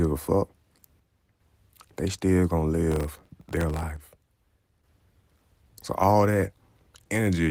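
A speech recording with two abrupt level drops and a burst of crackle between them. From 0.99 to 1.40 s and again from 3.96 to 4.84 s, the level falls suddenly by about 6 dB and then snaps back. That exact step, with no filtering or dulling of the tone, is the signature of one channel dropping out: the likely cause is one stereo channel going silent before a mono sum, leaving half the shared signal. A gain ride or fade would be gradual and wouldn't land on such a clean 6 dB. From 2.92 to 3.83 s, gritty tearing rides on the speech. This is processor overload crackle, dozens of missed deadlines in a row that each repeat a sliver of stale audio with hard edges. The sliver length points to a very small buffer, about 0.7 ms. Unlike codec artefacts, which smear across the whole clip, it starts and stops with the load. The light Opus coding at 24 kbps, fullband, adds only light coding damage throughout.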